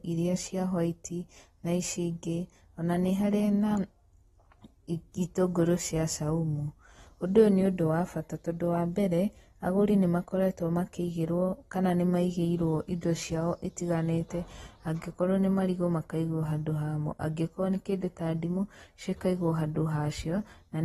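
AAC compression damage runs through the whole clip: nothing sounds above 12.4 kHz, and the speech has a dull, smeared, fizzy texture. This is likely AAC-LC at a low bitrate, roughly 32 kbps, quantising the spectrum coarsely and discarding the top band.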